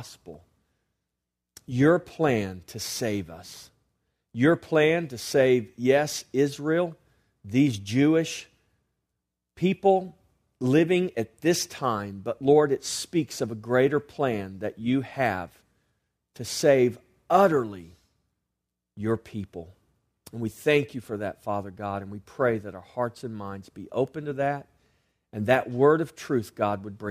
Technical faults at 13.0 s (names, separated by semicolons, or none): none